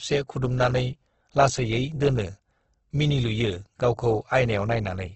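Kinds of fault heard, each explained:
Opus compression: The speech sounds rough and grainy all the way through, with nothing above 8.2 kHz. That heavy, noisy texture is likely Opus in its music mode, filling starved bands with folded or noise content, which fits a bitrate around 12 kbps.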